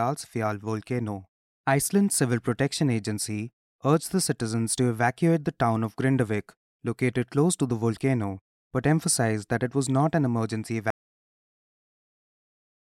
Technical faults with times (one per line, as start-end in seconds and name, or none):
10.90-12.93 audio dropout to silence